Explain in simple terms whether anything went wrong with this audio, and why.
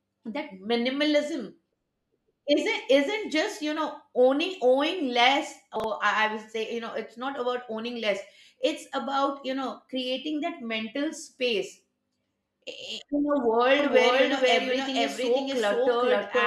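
Chunks out of order at 5.76 to 5.84 s: a 40 ms piece of audio played one slot late, so the sound briefly jumbles.

Doubled audio track from 13.79 s to the end: a second, equally loud copy trails about half a second behind, likely from a slower second capture path or two misaligned copies in an edit.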